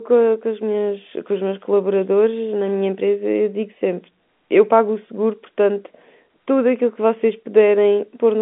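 Listening through this speech recording, nothing technically wrong stood out.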